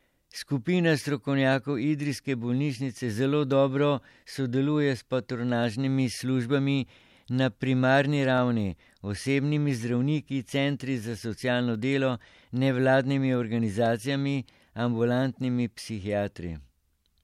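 From about 0.16 s to 16.59 s there's a click every 1.37 s, roughly fifteen in all, through the speech. That's the signature of clock drift buffer slips: two clocks likely disagree by around 150 ppm, so a handful of samples gets dropped or repeated each time.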